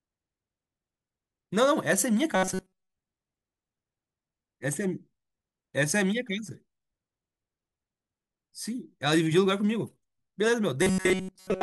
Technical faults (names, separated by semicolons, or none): robotic sound from repeated short buffers